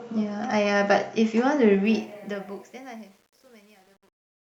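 From 1.85 s to 4.60 s, truncation distortion on the fade-out: undithered steps consistent with 9-bit resolution make it gritty, worst from 2.36 s.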